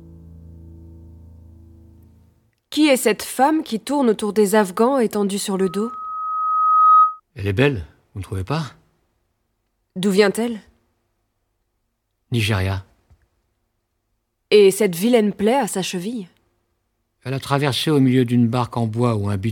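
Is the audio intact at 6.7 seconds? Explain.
No: loudspeaker feedback squeal runs from 5.59 to 7.20 s, where the microphone picks up its own loudspeaker and a 1.3 kHz tone swells over roughly a second and a half to about 10 dB above the sound.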